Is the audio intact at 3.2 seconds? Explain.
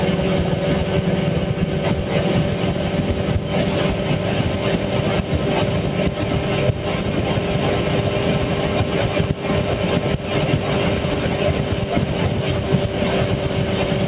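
Yes, the audio is intact at 3.2 seconds; it has only the narrow telephone-band sound of a G.711 mu-law call path, with nothing above 4 kHz.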